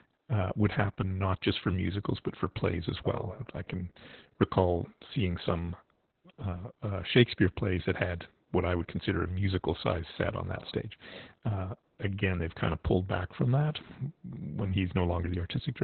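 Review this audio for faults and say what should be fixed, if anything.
Opus voice compression throughout: nothing survives above 4.2 kHz, and coarse SILK excitation coding leaves the speech muffled, hoarse and slightly robotic, consistent with roughly 8 kbps. Encode at a higher bitrate, around 24 kbps or more, so Opus keeps wideband or fullband audio.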